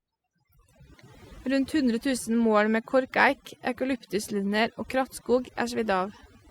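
Overdone noise removal runs through the whole speech clip. A noise reducer set too strong is cutting individual frequency bands whenever they sit near its noise estimate. Quiet parts of the voice vanish with them. Pauses fall to near silence with twinkling specks.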